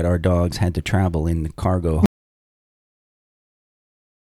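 At 2.06 s the speech cuts off mid-flow and never returns: everything through to the end is dead silence, with no room tone beneath it. This is an audio dropout to silence, most likely a lost input or mute while recording continued writing silence.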